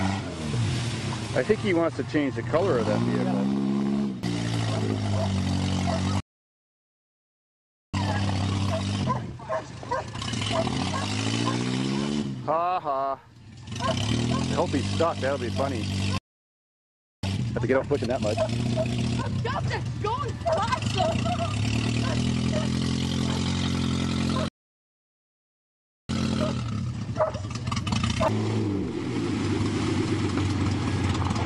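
At 6.20 s the sound halts mid-flow and stays silent for about 1.73 s until 7.94 s. This is a playback stall, likely from the player running out of buffered data or its thread being blocked. Unlike a dropout, where a short gap is lost, this is a long, clean silence. The stalls recur at 16.18 to 17.23 s (about 1.05 s) and 24.48 to 26.09 s (about 1.61 s).

Each stall is followed by time-compressed catch-up. From 7.94 to 10.94 s the audio runs at 1.25 times speed, from 17.23 to 19.33 s at 1.5 times, and from 26.09 to 29.09 s at 1.15 times. The player is trimming its backlog by cutting small slices and cross-fading across the joins. The pitch stays normal, so it doesn't sound like a simple fast playback that raises everything in tone.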